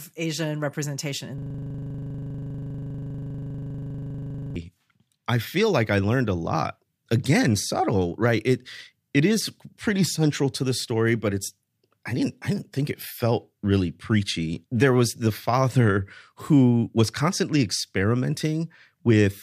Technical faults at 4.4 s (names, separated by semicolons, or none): system hang loop